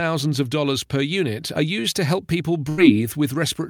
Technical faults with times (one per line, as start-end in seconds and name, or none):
2.69-2.79 burst of packet loss